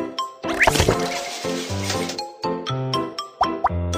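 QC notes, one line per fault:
No faults heard.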